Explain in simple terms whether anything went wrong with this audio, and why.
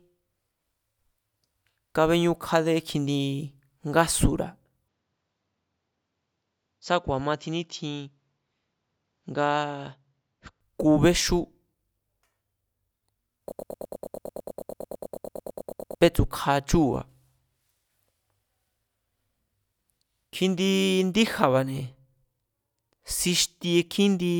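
Two things go wrong. Right after "kjindi ngásura̱", at 4.88 s, the speech turns duller and slightly quieter, loses its crispness above about 7.6 kHz, and gains faint new background noise until 10.61 s. This most likely comes from the input switching to a poorer device, a lower-grade microphone path.

From 13.52 s to 16.01 s there is a broken-record loop. A 110 ms sliver of sound repeats back to back, stuttering for about two and a half seconds before normal speech resumes with "bétsu̱kja chúu̱ba̱". The likely cause is a stalled stream resending its last fragment, so the real audio from that stretch is lost.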